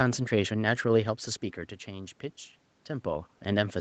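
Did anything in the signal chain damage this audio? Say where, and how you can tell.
No, nothing in the signal chain damaged this audio.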